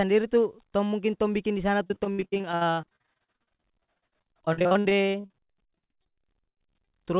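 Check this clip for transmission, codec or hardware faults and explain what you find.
Two faults are audible: a long run of repeated packet loss across most of the clip, and a jitter buffer slow-down near the end. The narrowband call path, with nothing above 4 kHz, fits a G.711 A-law style codec.

Repeated packet loss (robotic sound) runs from 1.84 s to 6.95 s. Dozens of short gaps, the longest about 80 ms, were patched by stretching the preceding sound, and about 41% of this stretch is concealment. Speech turns choppy, with syllables clipped. On a waveform the envelope breaks into repeated, flattened chunks. A spectrogram shows smeared, copied harmonic bands where detail should change.

Jitter buffer slow-down occurs from 5.59 s to 7.12 s. The receiver repeated pitch periods and bits of pause to rebuild its reserve, adding about 40 ms and playing at 98% speed with unchanged pitch. Sounds drag slightly. 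A waveform shows near-identical repeated cycles. On a spectrogram, harmonics hold steady while events spread a little in time.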